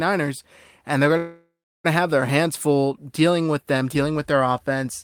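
A call audio freeze interrupts the speech from 1.17 to 1.86 s. The last sound is stretched into a fading buzz or hiss, then about 0.33 s of silence. Delayed packets likely emptied the jitter buffer. Speech resumes where it stopped, nothing lost, but 0.67 s later.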